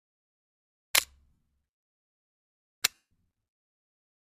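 Bluetooth LE Audio frames were lost at 1.35 s (about 67.5 ms) and from 2.94 to 3.11 s (about 172.5 ms). The LC3 decoder repeated the last spectrum with scrambled signs, so tones smear into noise, and the longer gap fades gradually toward silence.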